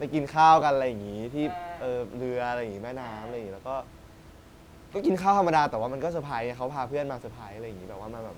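The speech signal shows no technical faults, and the only thing beneath it is the room's own background noise, sitting about 22 dB below the speech as part of the recording itself.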